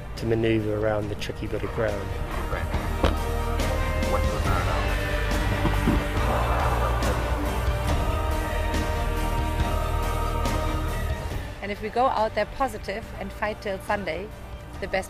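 Nothing stood out as a technical problem on listening.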